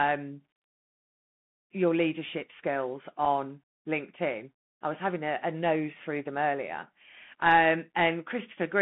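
The whole clip runs through the Bluetooth CVSD headset codec, so the speech sits in a narrow 150 Hz to 3.5 kHz band. The one-bit slope coding, which fits a 64 kbps link, is plainly audible: grainy hiss underneath, scratchy sibilants and roughness on loud bright moments.

At 3.25 s there's a Bluetooth headset packet repeat. About 7.5 ms of audio went missing, which points to two lost packets, and the chip replayed old data instead. With the gap that short, you get a quick buzzy tick rather than a sustained tone.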